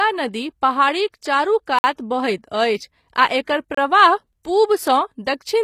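Throughout the speech, sibilants sound gritty and metallic and nothing reaches above 14.9 kHz. This is likely HE-AAC compression at a low bitrate near 24 kbps, whose rebuilt treble sounds synthetic rather than merely dull. Two blocks of digital silence cut in, from 1.79 to 1.84 s (about 54 ms) and from 3.75 to 3.77 s (about 29 ms). In each, the sound cuts out and back with no fade.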